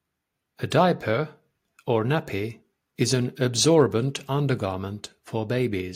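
Nothing stood out on listening to this speech recording.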